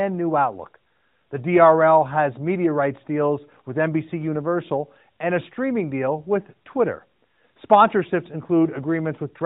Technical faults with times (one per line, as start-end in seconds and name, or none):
none